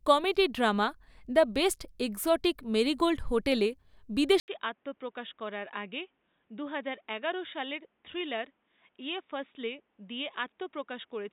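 At 4.4 s an 80 ms gap precedes duller, quieter speech cut off above 3.8 kHz, with new background hiss; the spectrogram's top band vanishes, likely an input switched to a poorer device.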